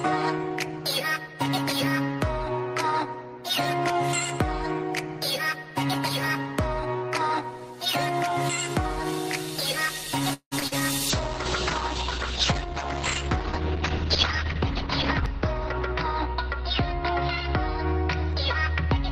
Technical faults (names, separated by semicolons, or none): call audio freeze; short concealed packet loss; call bitrate drop; jitter buffer speed-up